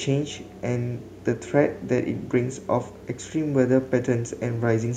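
Nothing in this bit of speech stands out as a technical fault at any point.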